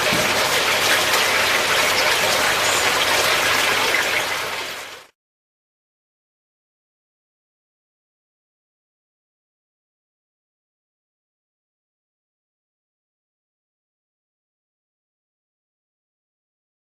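From 4.68 to 7.12 s the audio runs at about 105% speed, a jitter buffer speed-up: the receiver trimmed short pitch-period pieces, around 150 ms in total, to drain excess buffered audio. Unlike a playback-rate change, the pitch stays the same, so it sounds hurried.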